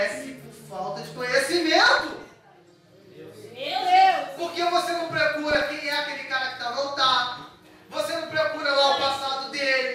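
At 5.51 s, running to 5.79 s, there's a short patch of DAB burbling, a burst of noisy blips laid over the sound. What's happening is that weak reception let bit errors slip past the error correction into the MP2 data, with a rate somewhere under half a percent. Corrupted samples then put short blips of noise in single sub-bands, and corrupted scale factors make sub-bands jump in level for up to a frame. That stretch lasts under a third of a second, and around seventeen frames are damaged.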